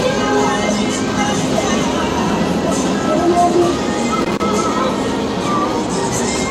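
Sounds, with a burst of loose connector crackle from 4.20 to 4.42 s, where a worn contact making and breaking chops the signal into irregular scratchy crackle.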